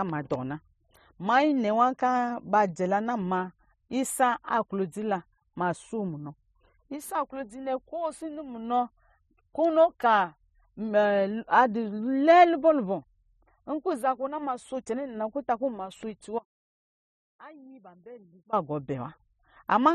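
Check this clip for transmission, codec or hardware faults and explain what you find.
One fault stands out in this speech clip. From 16.39 to 18.53 s, the speech drops abruptly to a faint ghost of itself, roughly 25 dB down, for about 2.1 s before snapping back. This is an audio dropout to a faint residue, likely a brief loss of the wanted signal while the downstream path stayed live, letting only weak leakage through.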